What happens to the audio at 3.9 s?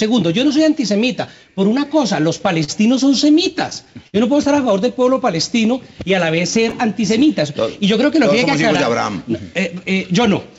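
Repeated stalls (stutter) run from 3.32 to 4.15 s: the jitter buffer ran empty five times, and each gap, up to 54 ms, was filled by stretching the preceding sound, so the audio drags without losing anything.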